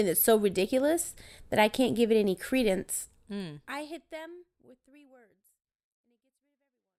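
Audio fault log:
No faults found; the speech fades out smoothly from about 3 s to the end, with no click or hard edge.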